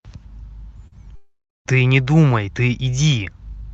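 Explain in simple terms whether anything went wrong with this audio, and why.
Two problems can be heard, both from audio that arrived late or never arrived over the call's network link.

The first is a short concealed packet loss at about 0.87 to 0.94 s. Roughly 40 ms of sound never reached the receiver in time, so the decoder covered the gap by stretching out the sound just before it and then blending back into the real signal. The patch sounds like a brief smear or wobble rather than a clean cut.

The second is a long network dropout from about 1.16 to 1.67 s, where about half a second of audio is missing, most likely because the connection stalled. The receiver first keeps extending the last sound as a fading buzz or hiss. That can only cover part of the gap, so about a quarter of a second of near-silence follows. The sound then resumes at 1.67 s, and the missing half second is simply gone.

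The call codec, Opus, limits the sound to frequencies below about 8 kHz.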